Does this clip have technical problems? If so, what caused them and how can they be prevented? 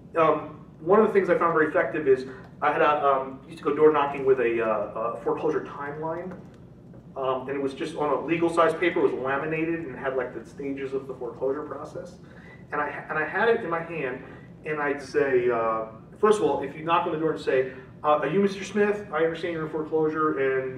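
Yes. From 2.74 to 3.68 s the sound runs 6.2% fast and jumps about a semitone sharp, then snaps back. From 15.02 to 15.99 s it runs 6.2% slow and drops about a semitone flat. This is likely a drift correction step, where clock-matching software abruptly changed playback rate to rebalance its buffer. Sharing one clock between devices, or using gradual continuous resampling, prevents it.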